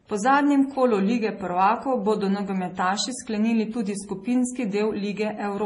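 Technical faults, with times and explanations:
Throughout, transcoding between lossy codecs: the speech sounds dull, with nothing above about 10.6 kHz, and two kinds of compression damage sit on top of each other and are heard together. This is likely a low-bitrate MP3 pass re-encoded as low-bitrate Vorbis, where the second codec wastes its few bits reproducing the first codec's artefacts and adds its own, and the lower band limit survives.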